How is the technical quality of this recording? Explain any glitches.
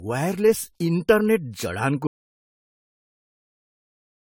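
The technical quality is poor, with two problems. Throughout, generation loss from likely repeated AAC-LC encoding (about four passes, around 64 kbit/s) has compounded quantisation noise, leaving the speech swirly, hollow and blurred, with nothing above 19.9 kHz. At 2.07 s, an audio dropout to silence occurs when the input was likely lost while recording continued. The speech cuts off into total silence, with no room tone, through to the end.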